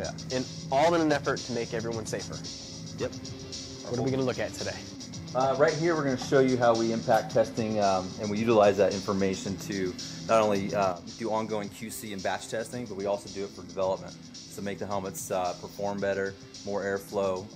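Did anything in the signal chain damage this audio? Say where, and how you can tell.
Yes. One channel drops out at 10.92 s and stays out until the end of the clip. The overall level falls abruptly by about 6 dB at that point, and the tonal character is otherwise unchanged. That pattern likely comes from losing one stereo channel before the mono fold-down: when both channels carry the same material, summing them doubles the amplitude, so losing one halves it. That costs 6 dB without altering the spectrum.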